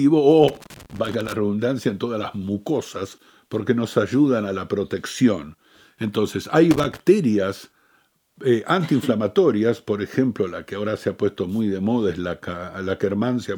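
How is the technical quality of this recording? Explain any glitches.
The speech is marred by loose connector crackle in two bursts, from 0.48 to 1.33 s and from 6.71 to 7.00 s. A worn or dirty contact in the signal path briefly loses and regains connection as it shifts. That chops the audio, and any DC on the line is released as pops. The result is ragged, irregular scratching laid over the speech.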